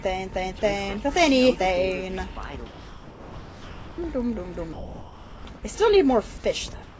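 At 0.59–0.62 s, 2.66–3.98 s and 4.73–5.45 s, the sound is replaced by flat, hiss-like noise: sound dropped by the voice detector, most likely because the sender judged quiet material to be background and stopped transmitting. Real content is lost: all 30 ms of the first gap, about 570 ms of the 1.32 s gap and about 450 ms of the 720 ms gap. Packet-loss concealment would repeat or stretch nearby audio, but here only featureless noise fills in until the detector reopens.

From 6.83 s to the end, the real background, which sits about 21 dB below the loud passages, gives way to what is likely comfort noise in place of the background. The steady, detail-free hiss is about 4 dB quieter than the ambience it replaces. Unlike the earlier dropouts, no foreground sound is cut off, and only the background's texture changes. Throughout the clip, nothing sits above 8 kHz, which fits a G.722 wideband call path.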